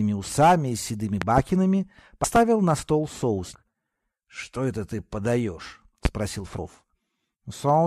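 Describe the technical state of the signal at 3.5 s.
At 3.53 s the signal jumps forward: compressed frames are skipped, so about 200 ms of audio never plays. The decoder dropped a run of frames, either missing from the file or rejected as damaged, and the gap points to roughly seven frames of about 23.2 ms each. The splice is heard as an abrupt join, followed by the sound resuming further along.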